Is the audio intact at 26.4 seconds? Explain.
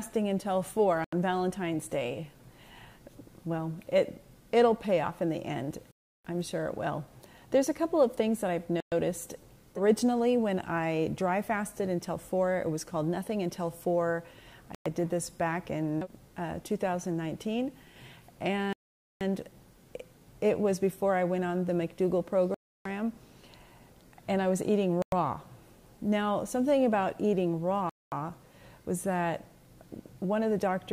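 Yes, the audio is intact at 26.4 seconds, with no dropout, glitch or other fault at that moment.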